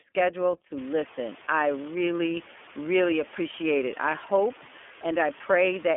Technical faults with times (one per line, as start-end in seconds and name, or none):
0.00-5.97 iLBC codec
0.77-5.97 low bit depth with dither